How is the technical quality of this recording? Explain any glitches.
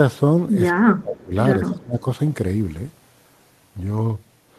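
The recording has two brief level collapses in the speech. From 0.81 to 1.34 s and again from 1.69 to 2.06 s, the voice dips sharply, by roughly 20 dB and then about 15 dB. This is likely speech suppressed in double talk: an echo canceller couldn't separate the talker from returning echo and attenuated both.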